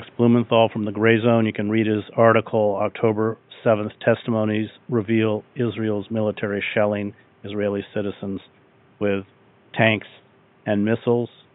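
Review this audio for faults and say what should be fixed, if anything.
Nothing needs fixing, as the speech signal shows no technical faults, and the only background sound is the room's own ambient noise sitting about 35 dB below the speech.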